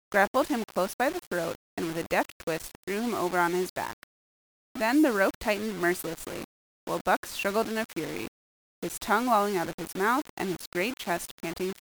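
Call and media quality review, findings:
Gritty, grainy distortion on the speech throughout, riding with the level; quiet bits sputter. Likely low bit depth without dither, about 5 bits rounded, error only around 15 dB down.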